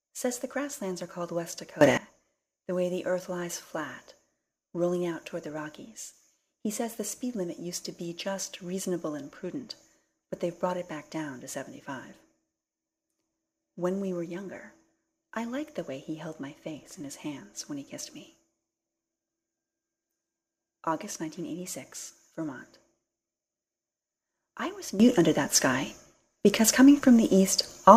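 The sound has two sudden gain jumps. From 1.81 to 1.97 s it rises about 18 dB, and from 25.0 s to the end about 13 dB, likely from gain applied without a ramp. The waveform steps abruptly, and the spectrogram brightens across all frequencies, including the noise floor.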